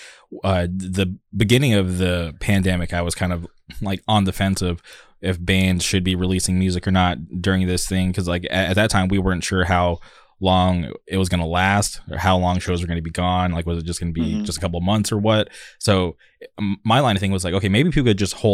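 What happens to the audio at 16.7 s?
Nothing goes wrong at 16.7 s; the speech plays through that moment intact, with no dropout, click or distortion.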